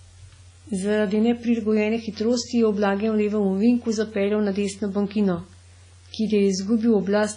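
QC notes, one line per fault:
Throughout, WMA compression: the speech sounds ringing and washy, with a hiss that swells and fades along with the voice and nothing above about 10.3 kHz. That smeared, band-limited character likely comes from a heavy WMA 1 encode, which fits a bitrate around 24 kbps.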